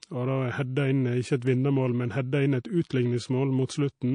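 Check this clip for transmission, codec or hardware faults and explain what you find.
There are two problems here, both codec-related.

The whole clip sounds watery and swirly, with a dulled top end. That's likely MP3 compression at a low bitrate, around 40 kbps, cutting treble and dropping weak detail.

Pre-echo shows up at 1.40 to 1.42 s and 3.67 to 3.69 s: a hiss about 11 and 13 dB up, spreading roughly 24 and 21 ms ahead of sharp onsets. The codec smeared its noise across long blocks without switching to short ones, so those attacks sound soft.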